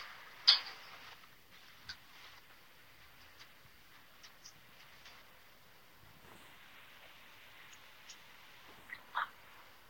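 The sounds throughout carry generation loss: swirly, hollow smearing and softened attacks, likely from several Vorbis passes around 62 kbit/s. The spectrogram shows patchy holes and nothing above 16.6 kHz.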